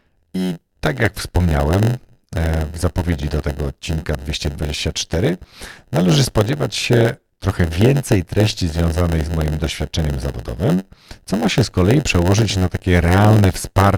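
A steady buzz at about 91.9 Hz sits under the speech for its whole length, and the talking drags, running at 0.919 times normal speed while keeping roughly its usual pitch. That is a block size mismatch (padded): one stage hands over blocks a little shorter than the next stage reads, so each block ends in a short run of zeros. The gaps recur 91.9 times per second and stretch the timing by that same 0.919 ratio.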